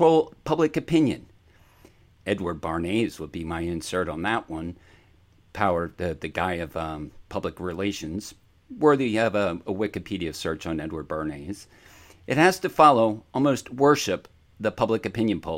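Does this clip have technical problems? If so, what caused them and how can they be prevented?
No, nothing technical goes wrong anywhere in this speech recording, so there's nothing here to track down or guard against.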